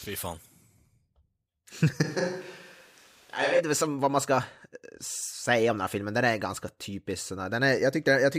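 From 2.05 s to 3.59 s the close microphone likely dropped out, forcing a switch to a distant microphone. The speech abruptly turns hollow and roomy, loses bass and falls a few decibels, and room noise rises to about 30 dB below it, before snapping back.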